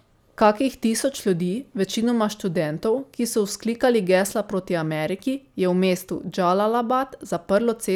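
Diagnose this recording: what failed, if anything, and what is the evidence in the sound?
Nothing in this recording points to a failure at any stage, from capture through to playback.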